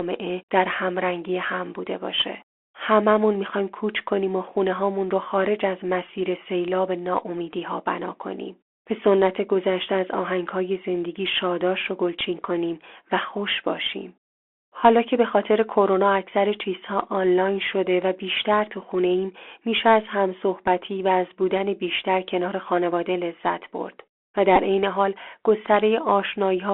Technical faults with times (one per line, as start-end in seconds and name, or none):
0.00-26.73 Bluetooth CVSD headset codec
12.19 Bluetooth headset packet repeated
24.56 Bluetooth headset packet repeated